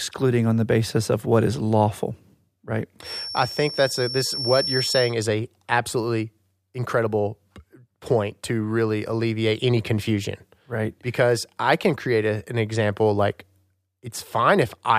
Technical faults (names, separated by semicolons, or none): feedback whistle